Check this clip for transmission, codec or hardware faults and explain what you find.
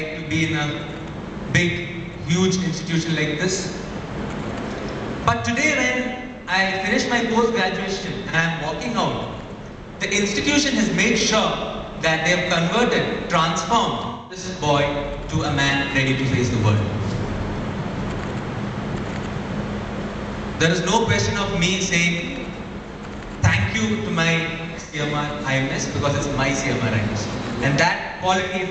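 There are four AAC frame losses with concealment, at 7.99–8.35 s, 14.09–14.46 s, 24.80–24.99 s and 28.42–28.53 s. Each time, the decoder replaced missing frames by recycling the last good spectrum. The result is a smeared, noisy, phasey patch. The first event is scattered gaps, none longer than about 40 ms. The others total roughly 85 to 213 ms of lost audio. These lengths fit two to five lost frames.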